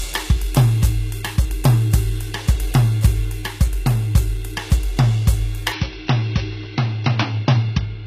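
Music, with treble that sounds gritty and metallic throughout, most likely from HE-AAC compression at a low rate, around 20 kbps. The highs stop at 14.9 kHz. Unlike a plain low-pass, the upper band is present yet synthetic, rebuilt from lower bands whose harmonics don't align. From 5.72 s to the end the input switched to a poorer device: the band suddenly stops at 5.8 kHz, the level drops by roughly 5 dB, and a new noise floor appears about 30 dB down, with no gap at the switch. A filter would only dull the top, but here tone, level and noise all change at one instant, pointing to a different input device.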